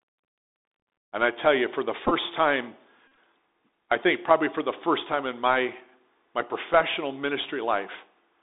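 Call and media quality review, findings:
Bluetooth CVSD headset codec, whole clip: the narrowband 1-bit adaptive delta link, consistent with 64 kbps CVSD, confines the speech to roughly 200 Hz to 3.7 kHz. Plainly audible damage: scratchy sibilants, slope-overload distortion on loud highs, and granular hiss underneath.

Bluetooth headset packet repeated, 2.06–2.13 s, just after "tell you for the": packets between headset and phone drop and the last packet's data is decoded again. About 34 ms of the 53 ms span is lost, with repeat runs up to about 15 ms giving a brief buzz near 267 Hz.

Bluetooth headset packet repeated, 3.08–3.17 s: same link loss with the last packet replayed. About 64 ms is lost across a 98 ms span. The longest run, around 40 ms, produces a buzz near 267 Hz before clean packets resume.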